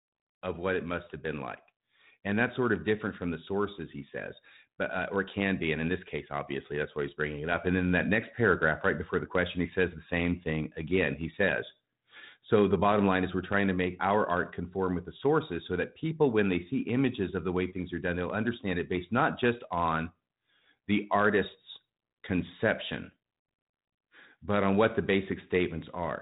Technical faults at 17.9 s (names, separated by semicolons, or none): none